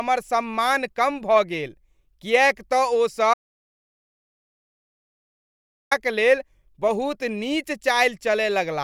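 A speech recording with an audio dropout to silence from 3.34 to 5.91 s, where about 2.58 s of sound vanishes into silence with no room tone, likely from the input being lost while recording continued. The waveform shows a dead-flat line; the spectrogram shows a completely blank column.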